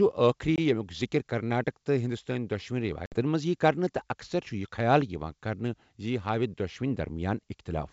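A speech clip on a G.722 wideband call, whose faint upper-band hiss is audible, with packet loss on an ADPCM call at 0.56 to 0.59 s (a 20 ms gap, about one packet) and at 3.06 to 3.16 s (60 ms, a few packets). Each shows as a hard-edged silent column on a spectrogram or flat line on the waveform. Afterwards the decoder's predictor and step size have drifted from the sender's, so speech returns with a brief, slight distortion before settling.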